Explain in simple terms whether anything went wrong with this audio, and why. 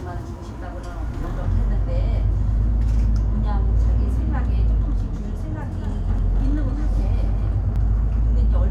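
From 5.06 to 7.76 seconds there is a doubled audio track. A quieter copy follows about a third of a second behind, likely from a second, slower recording path.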